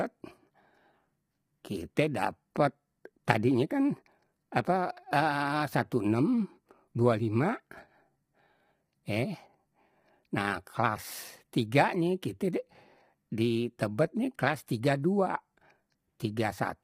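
From start to finish the speech sounds rough and grainy, with hiss filling the gaps between voice harmonics and a thin, synthetic-sounding top band. The likely cause is heavy low-delay AAC compression (AAC-ELD) at a rate fitting about 24 kbps. Its short frames resolve pitch harmonics poorly, so the damage is steady graininess on voiced sounds rather than the swirling, warbly artefacts of a longer-frame codec.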